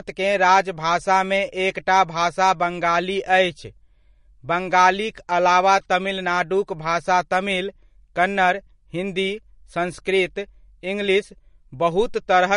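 Throughout, the speech shows MP3 compression damage. Nothing sounds above 10.6 kHz, and the texture is watery, which fits a likely bitrate near 40 kbps.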